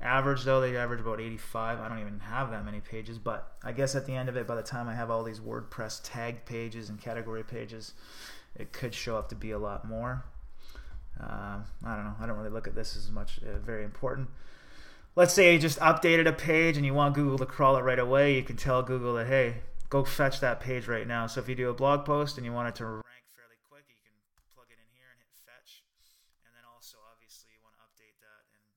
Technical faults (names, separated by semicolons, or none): one channel inverted